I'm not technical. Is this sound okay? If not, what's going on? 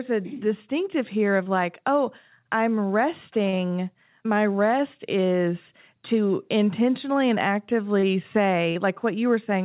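No. There's short concealed packet loss: at 1.43 s (between "distinctive here" and "like oh I'm"), 3.50 s, 8.00 s and 8.72 s, the call dropped about 30 ms of audio, and the receiver patched each gap by stretching the previous sound, leaving a brief smear or wobble.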